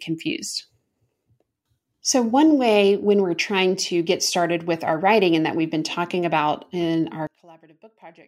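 From 7.27 s to the end at 8.28 s, right after "been talking about in", the speech collapses. It drops by about 26 dB and turns faint. The likely cause is one channel inverted. One stereo side has flipped polarity. The centred speech is common to both sides, so it cancels when they are summed to mono. Only the small difference between channels survives.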